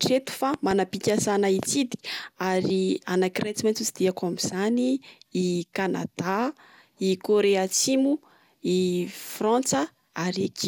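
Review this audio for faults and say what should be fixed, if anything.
A loud pop, a sharp double thump from 0.54 to 0.73 s and a harder single one at 1.63 to 1.65 s, sits over the speech, likely from a voltage spike such as a plug, switch or static discharge. Secure connections and switch equipment before recording to prevent it.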